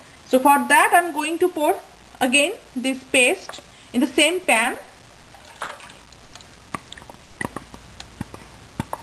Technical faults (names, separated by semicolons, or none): repeated stalls (stutter); short stall from a late packet; call audio freeze